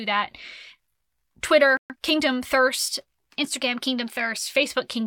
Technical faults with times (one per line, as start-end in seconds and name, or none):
1.77-1.96 digital broadcast dropout
2.78-4.38 drift correction step